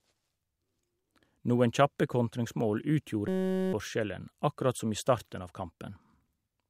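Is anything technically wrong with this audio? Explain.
Yes. A system hang loop runs from 3.28 to 3.73 s. The driver stalled while the hardware kept replaying one 5.33 ms slice, which fits a 256-sample buffer. Repeating at 188 Hz, it replaces about half a second of speech with a steady buzz.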